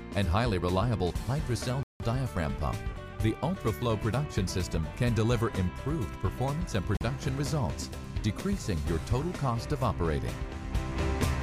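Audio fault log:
1.83–2.00 s and 6.97–7.01 s, Bluetooth stall: the sound drops abruptly to dead silence, for about 170 ms the first time and 41 ms the second, then carries on from where it broke off. Each gap is likely a wireless hold-up: interference delayed packets on the link, the headphones' small playback buffer emptied, and output halted until the retransmitted data arrived and refilled it.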